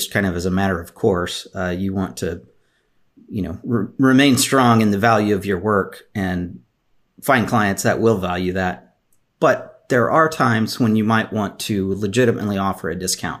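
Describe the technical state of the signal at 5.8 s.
At 5.8 s the speech signal is intact, with no technical fault present at that moment.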